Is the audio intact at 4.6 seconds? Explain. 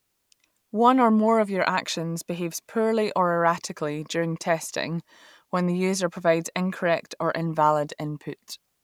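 Yes, at 4.6 seconds the speech runs on cleanly, with no dropout, click, distortion or other fault to be heard at that moment.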